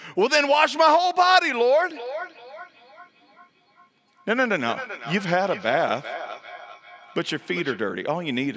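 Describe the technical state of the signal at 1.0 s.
At 1.0 s the speech is intact, with no fault present; it has passed through normal call microphone processing, which trims the lowest bass and leaves nothing above 8 kHz.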